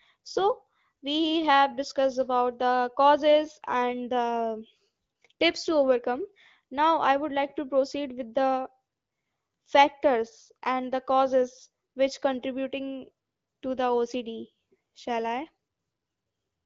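There are no technical faults to describe in time order; the speech comes through the AMR wideband (HD Voice) codec at 12.65 kbit/s as expected.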